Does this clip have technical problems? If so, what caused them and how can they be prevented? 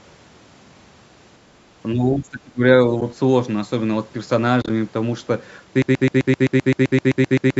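Yes. Speech suppressed in double talk, 1.94 to 2.63 s: the speech dips by around 20 dB for most of a second. This likely happened because both sides talked at once, and the echo canceller, unable to tell the local talker from loudspeaker echo, turned everything down. Better echo cancellation with double-talk detection, or a headset instead of an open loudspeaker, prevents this.

AAC frame loss with muting, at 3.01 s and again from 4.62 to 4.70 s: the first is a single soft-edged gap of about 10 ms. The second is a cluster of short holes spread over 80 ms, the longest around 30 ms, which fits several lost 10 ms frames. The decoder zeroed the missing frames, and the overlapping windows faded the sound out and back in. A steadier network connection, or forward error correction and packet-loss concealment in the codec, prevents this.

Broken-record loop, 5.82 s to the end: a 129 ms fragment repeats back to back 14 times, and the speech that should have followed is lost. 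This is likely a stalled player, encoder or stream that kept resending the last piece it held. Stall detection that mutes or resynchronises instead of replaying the buffer prevents this.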